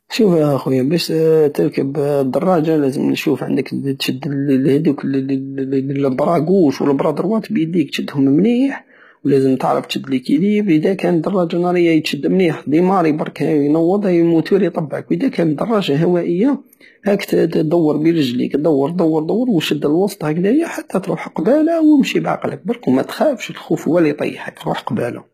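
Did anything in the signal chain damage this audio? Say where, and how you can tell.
Yes, at the codec stage throughout: gritty, lispy sibilance and synthetic treble ending near 14.9 kHz point to a likely low-bitrate (around 20 kbps) HE-AAC compression, unlike plain low-pass dullness.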